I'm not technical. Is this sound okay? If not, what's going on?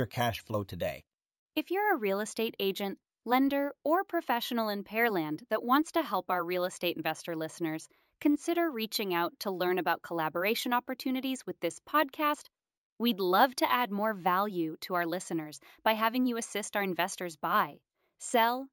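No. Imaging from sample-and-hold upsampling runs through the whole clip. The speech was converted to a higher sample rate, which fits a step from 16 kHz to 48 kHz, by repeating each sample without smoothing. That leaves ghost copies of the sound high up, starting between 8 and 16 kHz. You hear them as a thin, metallic fizz riding on the speech, growing louder and quieter along with it.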